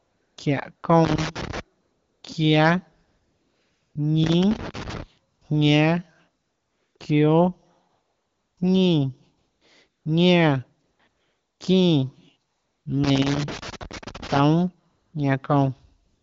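AMR comfort noise recurs throughout, from 0.0 s to the end at about 16.2 s. Each time the phone judged the talker silent, it stopped sending speech frames, and the receiver filled the gap with synthetic noise built from a rough level-and-spectrum sketch. The result is a smooth, steady hiss that switches in and out in place of the real background. These gaps range from single 20 ms flickers to stretches near 0.9 s, the longest running from 3.07 to 3.95 s.

Loose connector crackle appears three times: from 1.05 to 1.60 s, from 4.24 to 5.03 s, and from 13.04 to 14.39 s. A worn or dirty contact was making and breaking as it moved, chopping the signal on and off. This is heard as irregular bursts of scratchy crackle laid over the sound.

Beneath both faults, the audio carries the light coloring of the wideband AMR codec, which fits a rate around 12.65 kbit/s.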